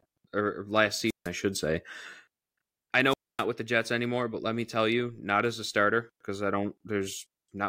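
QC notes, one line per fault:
1.05–1.30 s: wireless microphone squelch dropout. Hiss swells after "or last". The faded radio signal trips the squelch, muting 152 ms before "I should say".
3.07–3.45 s: wireless microphone squelch dropout. Static rises, then the receiver mutes for 256 ms. Sound returns at "with the".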